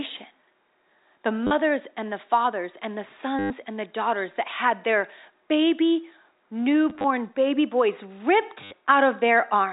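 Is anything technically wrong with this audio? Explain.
Yes. Packet loss with the last packet repeated occurs at 1.47–1.51 s (before "and the fathers and"), 3.39–3.5 s (between "the fathers and the" and "and the daughters that"), 6.9–7.04 s (scattered, before "baby boys") and 8.64–8.71 s. Dropped packets were filled by replaying the previous one. The gaps fit 10 ms packets, so longer runs buzz near 100 Hz. The result is a brief robotic stutter, longest at 3.39 s, where about 110 ms was lost.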